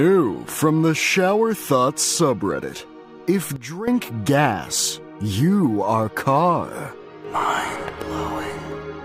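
At 3.56 s the level drops suddenly by about 13 dB. This is a sudden gain jump. The whole signal falls at once, with the background noise sinking together with the sound. There is no fade. The level changes between one sample and the next. At 3.88 s it snaps back to its earlier level just as abruptly. The likely cause is a digital gain setting applied without a ramp, then reversed.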